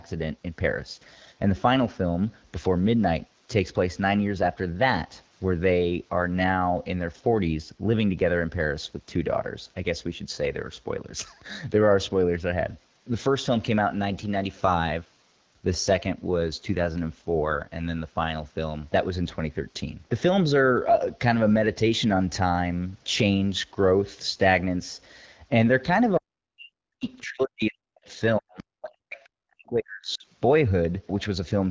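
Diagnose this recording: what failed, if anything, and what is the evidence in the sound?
AMR rate drop, 14.87 to 17.7 s, a network-stage fault: the speech turns rougher and more synthetic with no gap and no loss of bandwidth. A weak radio link pushed the AMR-WB codec from 12.65 down to 8.85 kbit/s, trading coding bits for error protection, until the rate recovered.

Speech suppressed in double talk, 26.18 to 27.05 s, 27.23 to 28.19 s and 28.38 to 30.25 s, in call processing: the speech dips by roughly 40 dB in pieces. The likely cause is the echo canceller attenuating everything while both sides talked, unable to separate the talker from loudspeaker echo.

Other side's voice leaking through, 27.04 to 27.22 s, 28.58 to 28.63 s and 29.25 to 29.29 s, also call processing: brief scraps of a second voice sit about 35 to 40 dB below the speech, likely residual loudspeaker echo the canceller failed to remove from the microphone.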